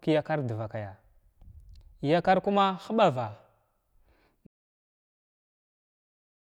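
Speech, and at 4.47 s it just stops dead, an audio dropout to silence that runs right to the end of the clip, about 2 s of it. What gives it away is that there's no room tone at all in that stretch, just silence. So the recorder kept running while its input went away, likely a disconnected device, a failed link or a stray mute, and whatever was being said after that point simply isn't there.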